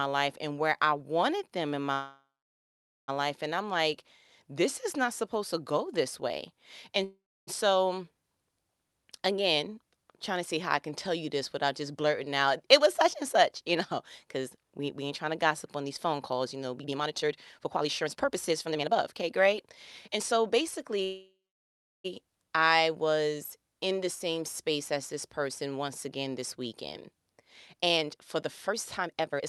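Packets were likely held up in transit, draining the jitter buffer, so the receiver stretched the last sound into a fading buzz before going silent: call audio freezes at 1.93–3.10 s (about 0.8 s silent), 7.04–7.49 s, and 21.04–22.06 s before "I was in the", each adding a gap with nothing lost. Jitter buffer speed-up follows built-up backlog: the receiver cut pitch-period slices, hurrying the speech at unchanged pitch, at 9.59–10.05 s before "trying to see how" (107%), 12.66–13.76 s (105%), 14.23–20.99 s before "I was in the" (121%, roughly 1.5 s removed), and 27.78–29.47 s (145%).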